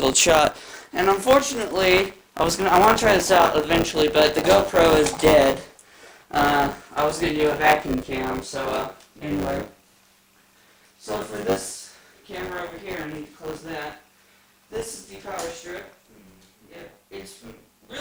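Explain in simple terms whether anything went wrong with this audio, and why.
There's a buffer tearing problem running the whole way through. The part of the system filling the audio buffer and the part playing it back have drifted out of step, so each little chunk ends up with a slice, roughly a sixth of it, of leftover sound from about 20 ms earlier, spliced in with hard joins. Those joins repeat 100 times a second, which is the robotic, rattly buzz you hear riding on the sound.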